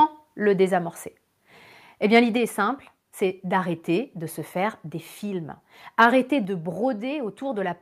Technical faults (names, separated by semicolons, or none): microphone volume stepped down; microphone overload